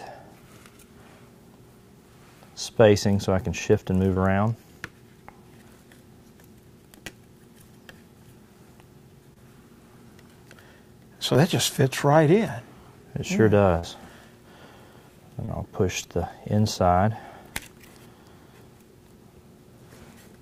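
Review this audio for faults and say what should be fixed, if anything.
Short concealed packet loss: audio data reached the decoder too late at 4.13–4.18, 9.34–9.38, 11.34–11.37, 13.79–13.85 and 15.45–15.49 s. The receiver covered each gap by continuing the preceding sound, either from its pitch or as shaped noise, then blended back. Each gap was about 20 ms, which fits one lost packet, except the 40 ms gap at 13.79 s, which fits two. Each fill is heard as a brief smear or wobble. To prevent this, give the link a steadier network path or a larger jitter buffer so that packets arrive before their playout deadline.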